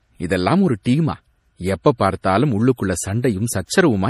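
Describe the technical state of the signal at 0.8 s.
From 0.83 to 0.86 s a short hiss runs just ahead of a sharp attack, which itself sounds soft and smeared. This is pre-echo: the codec spread its quantisation noise across a whole block, so noise sized for the loud onset fills about 26 ms of quiet before it.

Across this moment the speech also has a watery, swirly texture with plainly audible codec damage and nothing above 15.1 kHz. That points to MP3 compression, likely at a low bitrate around 40 kbps, where the encoder cuts the treble and lets weak frequency lines flicker between frames.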